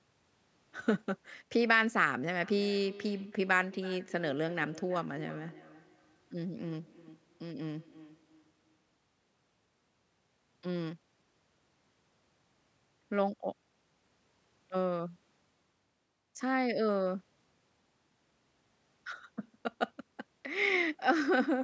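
Two devices in the same room were joined to one call, so one device's loudspeaker played back what the other's microphone had sent, and that microphone picked it up again; each device's echo canceller only removes its own playback, so the loop went uncancelled. In this speech clip the result is feedback echo between two devices from 2.42 to 8.95 s, with the speech returning at a repeat interval of roughly 300 ms, at most about 20 dB below the direct speech, over call microphone processing that leaves nothing above 8 kHz.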